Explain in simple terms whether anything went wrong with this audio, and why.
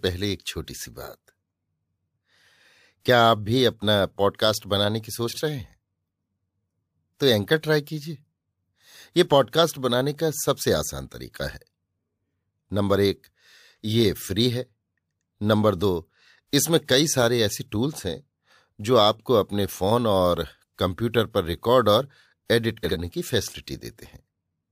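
Frames out of order at 5.28–5.41 s and 22.83–22.97 s: two tiny chunks of the speech were played in swapped order, causing a brief garbled flutter.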